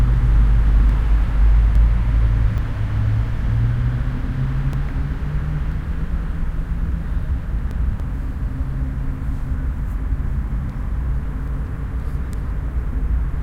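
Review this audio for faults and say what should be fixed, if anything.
Damaged data in a compressed stream shows up as five short blips, at 0.90, 2.58, 5.72, 8.00 and 11.48 s. At each point the decoder hits corrupted frame data, misreads or discards it, and loses sync until it finds the next valid frame header, so a stretch of audio is lost. The events are irregularly spaced, which points to scattered byte damage rather than a systematic fault. To prevent it, transfer and store the file with checksums, and re-fetch or re-encode it from an intact source.

Audio missing between chunks appears as four tiny skips, at 1.75, 4.73, 7.71 and 10.69 s, spaced almost exactly 3 s apart. Each one drops about 20 ms, and the two sides are butted together with no silence, leaving a small discontinuity in the sound. The strict 3-second spacing likely comes from a recorder or processor that works in 3-second blocks and loses about 20 ms each time it closes one block and opens the next. 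To prevent it, use a recording chain that writes blocks contiguously, with double-buffering or overlap so no samples fall between chunks.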